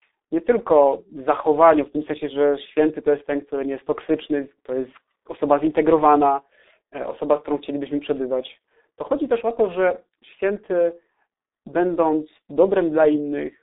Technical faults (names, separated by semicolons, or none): G.723.1 codec